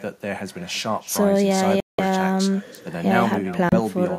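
Throughout the speech, an echo with no canceller trails each phrase by about a third of a second, a thin copy about 18 dB down: a distinct repeat rather than smeared reverberation. At 1.80 to 1.99 s the sound drops to about 184 ms of silence, and at 3.69 to 3.74 s to 29 ms, then resumes, likely a Bluetooth stall where the playback buffer ran dry; clean gaps, not garbled concealment.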